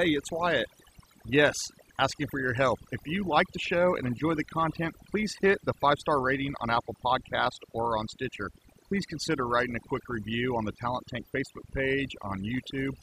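From start to finish the gaps between phrases drop to near silence speckled with twinkling chirps. That is overdone noise removal: a noise reduction process set far too aggressively has pushed individual frequency bands down or out whenever their level sat close to its noise estimate. Softer parts of the voice fell into that range too, so they were stripped along with the noise.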